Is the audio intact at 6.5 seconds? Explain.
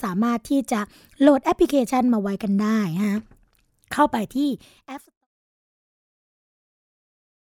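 Yes, the audio is intact at 6.5 seconds, with no fault at that point.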